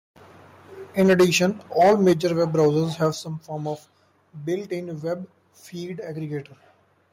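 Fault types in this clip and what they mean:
microphone overload: Peaks in this speech clip are clipped flat three times, from 0.99 to 1.37 s, 1.8 to 2.13 s and 2.6 to 2.67 s, just before "have some form of", likely from input gain set too high. The waveform shows squared-off tops, and the spectrogram shows broadband smearing.
microphone volume stepped down: The level drops abruptly at 1.13 s by about 2 dB, at 2.13 s by about 7 dB and at 3.15 s by about 6 dB, before "some form of", likely automatic gain control reacting to clipping. The waveform envelope shows sudden steps down, and the spectrogram darkens evenly.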